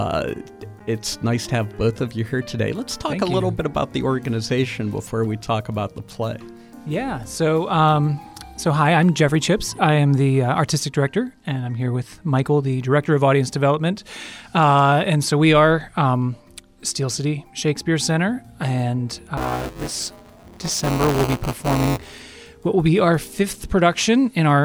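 From 19.37 s to 22.23 s the audio takes on a rough, robotic buzz at about 188 Hz, which fits a 256-sample buffer. This is buffer tearing: the writer and reader of the ring buffer have drifted so they cross within each period, and a small slice of every buffer repeats audio from roughly a hundredth of a second earlier, with hard joins on both sides. Unlike an underrun, there are no silent gaps, only a steady rattle that tracks the signal.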